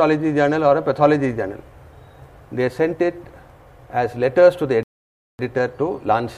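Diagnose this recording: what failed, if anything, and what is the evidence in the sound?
Playback stalled here: a rebuffering stall at 4.83 s. The sound drops to silence until 5.39 s, then picks up exactly where it left off. The player ran dry of downloaded audio and waited for more, adding roughly 0.56 s without losing anything.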